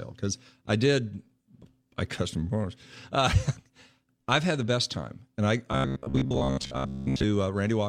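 Speech clip with robotic sound from repeated short buffers, 5.72 to 7.24 s, after "best time and I". A metallic buzz near 66.7 Hz runs through the span, with about 70% of it repeated audio. Likely cause: repeated 15 ms chunks.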